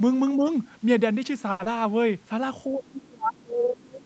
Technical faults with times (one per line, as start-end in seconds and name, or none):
0.36-0.46 speech suppressed in double talk
0.48-0.52 other side's voice leaking through
1.51-1.61 short stall from a late packet
1.63-1.67 short concealed packet loss
1.72-2.09 jitter buffer slow-down
2.68-4.05 speech suppressed in double talk